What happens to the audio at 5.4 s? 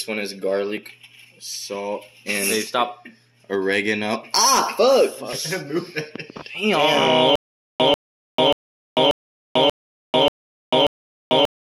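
CD scratch ticks, from 4.97 to 5.69 s: a surface blemish defeats error correction on each disc rotation, leaving five regular ticks of uneven strength, each a couple of milliseconds at most.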